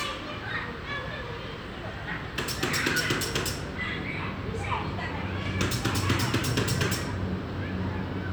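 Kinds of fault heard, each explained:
No kinds of fault are heard in this audio.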